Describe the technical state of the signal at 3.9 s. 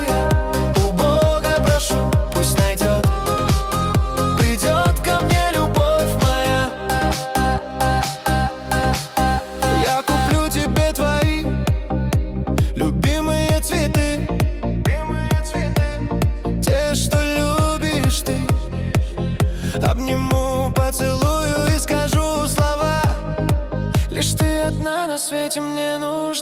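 At 3.9 s the signal is intact, with no dropout, distortion, noise or other fault audible at that point.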